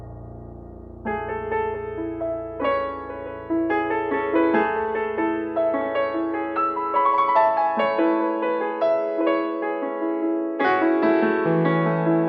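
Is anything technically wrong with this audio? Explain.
Yes. Sample clock jitter runs from the start to 8.60 s. The converter's clock wavers by roughly 0.4 microseconds, so samples land early or late. Steep waveform slopes suffer most. A faint hiss sits around 55 dB below the sound, rising on loud, bright passages.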